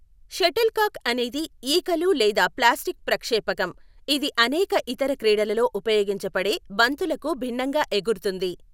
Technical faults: none

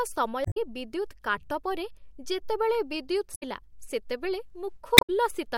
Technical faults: damaged data in a compressed stream

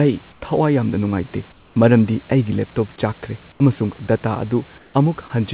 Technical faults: comfort noise in place of the background

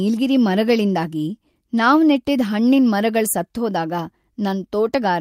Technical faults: none

